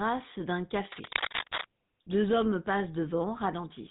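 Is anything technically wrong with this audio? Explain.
Yes, three faults are audible in this speech clip.

Throughout, the voice has a plainly audible buzzy, gravelly roughness and nothing above 4 kHz. This is the GSM full-rate codec at 13 kbps, which rebuilds speech from a vocal-tract model driven by sparse, regularly spaced pulses and discards high frequencies.

From 0.92 to 1.65 s, a burst of scratching, rustling noise sits over the speech at about the same level as the voice. This cable scratch noise likely comes from a worn cable, connector or control being moved, its fluctuating contact resistance adding dense, irregular noise.

From 1.34 to 1.44 s, inside that scratchy stretch, the speech breaks into squawks, pops and gargling. These are GSM bit errors at a rate of 1.74%. Corrupted filter, pitch or gain values reached the decoder, and the damage fits about four consecutive frames.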